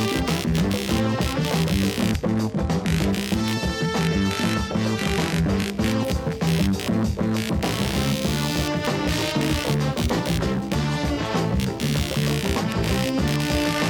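Running under the whole recording is computer activity noise: a buzzing, scratchy layer pulsing at around 70 Hz, below the wanted sound, roughly 10 dB down. Shifting processor or graphics load disturbs the ground shared with the audio circuitry, so the interference follows the machine's activity rather than the material. On a spectrogram it forms a ladder of horizontal bands at 70 Hz and its harmonics that strengthen and fade with the computer's activity, and on the waveform it fills the gaps between sounds.

At 2.09 s, compressed frames are skipped, and the audio lurches forward. About 50 ms of material never plays, most likely because those frames were missing or were rejected by the decoder as damaged. The waveform shows an abrupt discontinuity in the envelope at 2.09 to 2.15 s, and the spectrogram shows a brief vertical seam where the texture jumps.

At 6.04 s a corrupt frame is decoded, giving a sudden burst about 50 ms long that peaks near -15 dBFS. 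Flipped bits inside one compressed frame led the decoder to apply wrong gains or misread its codes, so energy landed at frequencies where it did not belong. On a spectrogram this is a compact rectangular patch of misplaced energy spanning 6.04 to 6.09 s, and on the waveform it is a frame-sized spike.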